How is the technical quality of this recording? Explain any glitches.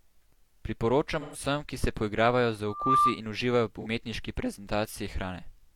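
The recording has two kinds of fault: brief stretches of AAC frame loss with concealment, and a burst of loudspeaker feedback squeal.

From 1.20 to 1.40 s, just before "ki se", and again at 3.81 to 3.86 s, AAC frames went missing. About 128 ms and 43 ms were lost, which fits three frames and then one. The decoder rebuilt each gap from the previous spectrum, so the speech turns smeared and noisy rather than dropping to silence or clicking as a plain dropout would.

From 2.66 to 3.21 s, a loudspeaker feedback squeal appears. The microphone picked up its own loudspeaker, and at 1.2 kHz the loop gain passed one. The tone swells over roughly a third of a second to about 10 dB above the speech. That rising build, not a steady level, separates it from a fixed whistle or interference tone.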